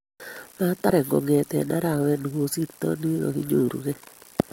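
A speech recording with damaged data in a compressed stream at 0.89 s: corrupted bytes make the decoder misread a frame and resync, leaving a brief glitch just before "kongete arawet".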